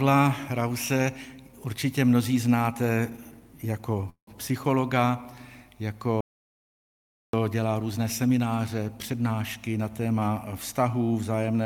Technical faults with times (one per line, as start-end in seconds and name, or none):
4.09-4.29 call audio freeze
6.21-7.33 audio dropout to silence
9.12-9.78 jitter buffer speed-up